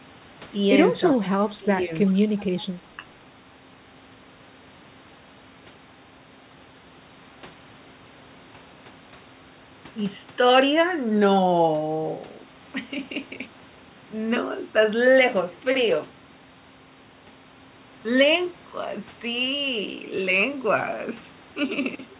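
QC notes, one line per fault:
1.59–1.93 s, speech suppressed in double talk: the level dips by about 10 dB over roughly 300 ms, likely the echo canceller ducking while both ends talk. The waveform envelope shows a visible notch.
2.07–2.11 s, echo leak: a faint copy arrives about 30 dB under the speech, 379 ms late, likely residual loudspeaker echo. It shows as a weak, delayed repeat of the harmonic pattern, cut off at 4 kHz like the rest of the narrowband call.
2.12–2.22 s, speech suppressed in double talk: a second short dip of about 10 dB, roughly 100 ms, likely the same suppression reacting to the overlap. The envelope shows a brief hollow, and the spectrogram thins.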